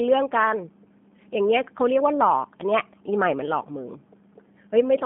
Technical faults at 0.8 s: G.729 codec

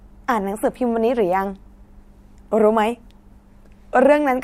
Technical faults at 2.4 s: none

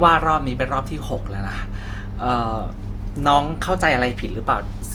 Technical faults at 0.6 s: generation loss

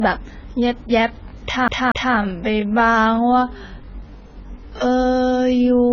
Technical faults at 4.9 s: AAC compression; time-stretched section

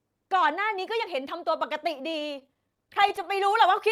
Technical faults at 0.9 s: none

